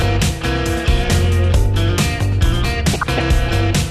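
Throughout, likely MP2 compression at a rate consistent with about 80 kbps starves the upper sub-bands of bits, so the sound is dull, gurgling and grainy. From 2.93 to 3.20 s comes DAB burbling: bit errors of around half a percent evade error correction, producing short blips of noise in single sub-bands.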